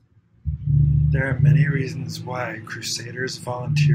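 There are no technical faults to describe in this speech clip.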